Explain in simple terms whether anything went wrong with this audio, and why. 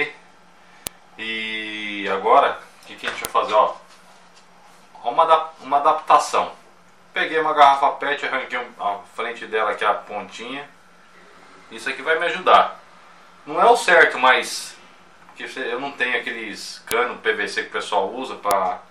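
Four sharp snaps, at 0.87, 3.25, 16.91 and 18.51 seconds, come from a file header played as audio: the opening header bytes of each joined piece were played as if they were sound. Unlike a gap or dropout, nothing goes missing; each snap simply marks where a new piece begins.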